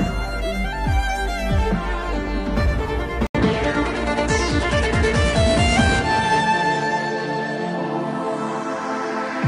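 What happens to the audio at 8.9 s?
At 8.9 s the audio is still band-limited, with nothing above 10.5 kHz, from 3.27 s to the end, likely an input switched to a poorer device after an 80 ms silence.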